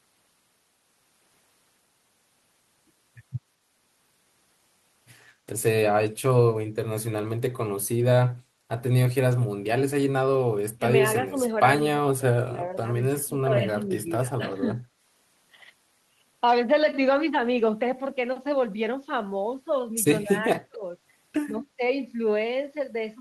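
The talker's speech keeps dipping and breaking up in pieces at 10.77–10.85, 11.25–11.38, 11.91–12.62, 12.97–13.92, 14.36–14.88, 20.24–20.84 and 21.5–21.81 s. That's the signature of speech suppressed in double talk. The canceller most likely couldn't tell the talker from loudspeaker echo while both ends spoke, so it clamped down. The drops range from about 10 dB to about 35 dB, and the deepest is around 20.24 s.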